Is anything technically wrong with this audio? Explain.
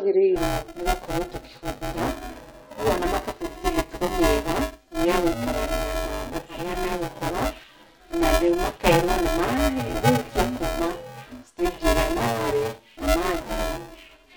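Yes. From 0.36 s to the end, buffer tearing: writer and reader cross each period, splicing in about half a buffer of audio some 10 ms old. That gives a robotic 345 Hz buzz, fitting a 128-sample buffer, which drops out in silences, unlike steady hum.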